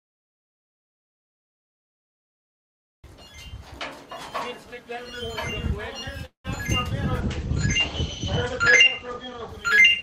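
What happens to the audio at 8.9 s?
At 8.9 s the audio is inside a call bitrate drop running from 6.96 s to the end. The encoder coarsens to a rate that points to roughly 14 kbps, so the sound turns rough and muffled, and a spectrogram shows everything above 8 kHz sharply cut away.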